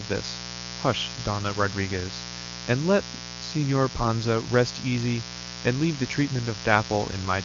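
From start to finish there's a raspy mains buzz at 60 Hz sitting fairly high under the speech, spiky switching harmonics leaking in from power wiring or poor shielding.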